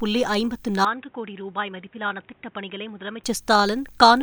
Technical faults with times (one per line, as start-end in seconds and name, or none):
0.85-3.24 input switched to a poorer device